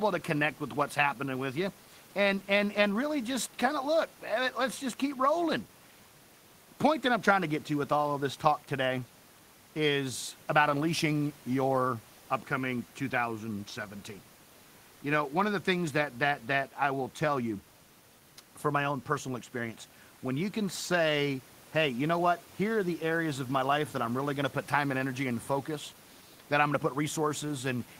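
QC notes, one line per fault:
No faults heard in this speech recording.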